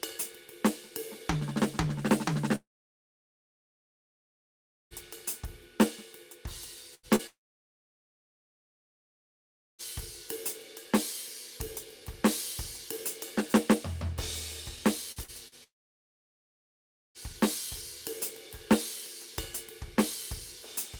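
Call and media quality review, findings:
Long network dropout at 2.55–4.94 s, 7.27–9.82 s and 15.64–17.18 s. The music tails off in a quick fading buzz, then goes flat silent for about 2.3 s, 2.5 s and 1.5 s. Likely the network stopped delivering. Playback resumes further on, and the missing stretch is gone for good.

Burst of packet loss at 6.95–7.10 s. Roughly 80 ms of music is lost, and the receiver holds the last sound and fades it down across the hole. It comes back further along with that chunk skipped. Network jitter or loss path, concealment doing its best.

Short concealed packet loss at 7.16–7.22 s. About 40 ms never reached the decoder in time, so it's papered over by extending the previous sound and blending back in. It's a brief smear right between the burst and the second dropout.

Repeated packet loss (robotic sound) at 15.12–15.55 s. There are three separate holes, the longest about 41 ms, with roughly a quarter of that span synthesized. 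Each patch extends the last sound before the next gap hits, giving choppy music with pieces missing just ahead of the third dropout.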